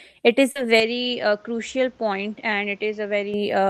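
Just after "it is", at 0.51 s to 0.58 s, there is a short concealed packet loss. About 40 ms of the call arrived too late for the decoder, and the receiver papered over the gap by extending the preceding sound before easing back into real audio. It comes across as a brief smear. Unlike a plain dropout, there is no hole of silence, and unlike a click, the patch has the sound's own colour.

From 0.8 s to 3.34 s the sound turns duller and boxier, with nothing above 7.6 kHz. The level falls by roughly 5 dB, and a different background noise sits around 30 dB below the signal. This is most likely the input switched to a poorer device, such as another microphone or a headset call profile. There is no silence at the change. What sets it apart from a bandwidth or codec drop is the new noise floor and level, which point to different hardware rather than heavier compression.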